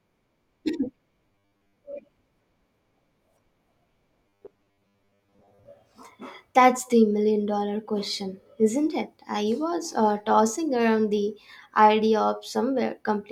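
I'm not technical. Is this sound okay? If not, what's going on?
No, there are two stretches of robotic sound from repeated short buffers: 1.27 to 1.77 s, and 4.27 to 5.66 s. In both, the speech turns into a flat, metallic buzz at about 100 Hz while still loosely tracking the words. The likely cause is audio arriving too slowly, so the player keeps replaying a tiny 10 ms slice to fill the gaps. Most of the real audio in those spots gets skipped.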